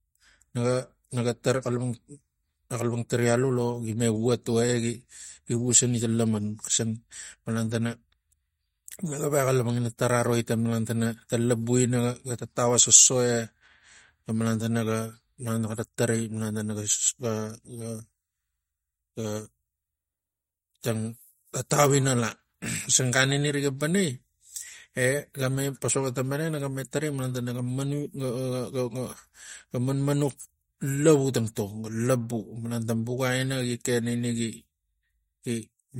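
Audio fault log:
Throughout: MP3 compression, plainly audible; the speech stops dead above 15.9 kHz and sounds watery as weak frequency lines drop out, likely from starving the encoder near 48 kbps.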